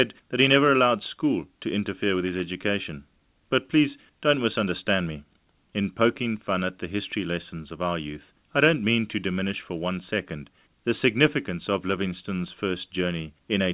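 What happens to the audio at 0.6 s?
Nothing goes wrong at 0.6 s: the speech passes through intact, carrying only the steady narrowband character of the G.711 call path, with nothing above 4 kHz.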